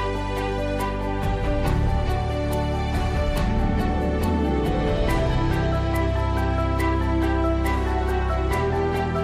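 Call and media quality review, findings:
No audible faults found.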